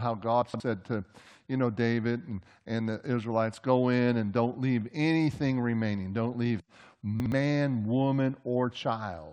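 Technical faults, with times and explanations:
0.42–0.6 s and 7.2–7.32 s, chunks out of order: a 60 ms chunk of speech plays two chunks late in the first span and one chunk late in the second, so the sound jumbles briefly at the three hard joins each reordering creates.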